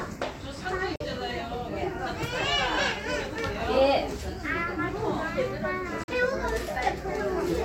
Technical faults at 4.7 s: none

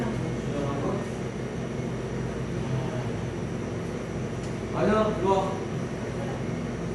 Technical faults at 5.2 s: Dolby Digital compression

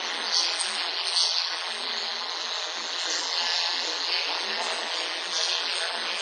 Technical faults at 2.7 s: overlap-add ripple; transcoding between lossy codecs

